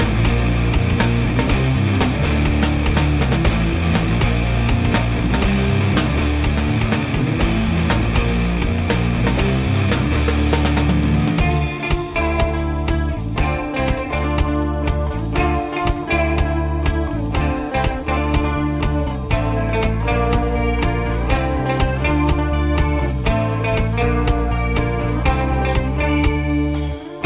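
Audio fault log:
No audible faults were found in this recording.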